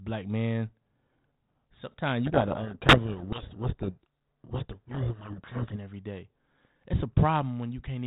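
From 2.26 to 5.76 s the speech sinks under harsh, grinding distortion, a codec payload misread in which the receiver takes each G.726 code word with its bits in reversed order, so valid-looking samples carry the wrong differences until packing agrees again, over the mild narrowband hiss of 32 kbit/s G.726.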